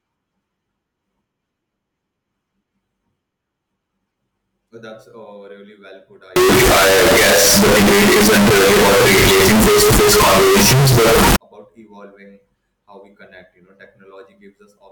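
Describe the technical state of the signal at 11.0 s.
At 11.0 s the speech is buried in very loud, harsh distortion that runs from 6.36 s to 11.36 s, with quiet stretches coming through as loud as everything else. This is most likely a signed and unsigned mix-up on 16-bit samples: reading the values with the wrong sign convention flips the top bit, so every zero crossing in the waveform becomes a jump across the entire range instead of a small step.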